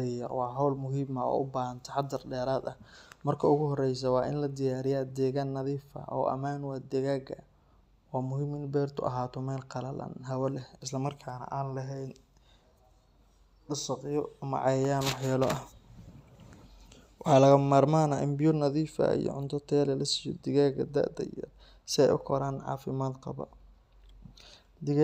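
No technical faults are audible anywhere in the speech recording.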